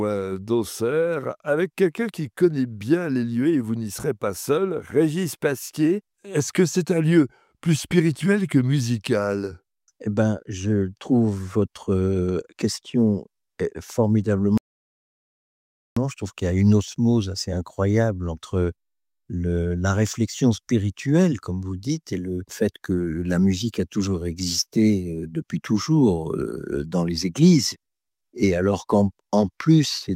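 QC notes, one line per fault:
14.58–15.97 s, audio dropout to silence: the input signal was likely lost through a disconnected device, failed link or stray mute while recording continued, writing silence for 1.39 s. The sound cuts off abruptly and resumes mid-flow, with no room tone in the gap, and that stretch of audio is gone.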